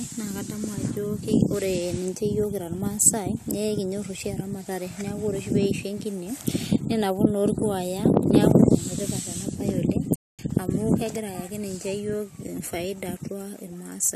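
A speech clip with a playback stall from 10.16 to 10.39 s, right after "tipata ena baye oleng". The audio halts mid-flow for about 230 ms of silence before continuing, most likely because the player ran short of buffered data or its thread was briefly blocked. Unlike a natural pause between phrases, the sound is cut off abruptly rather than tapering, and unlike a click or short dropout, the gap lasts long enough to register as a hold-up.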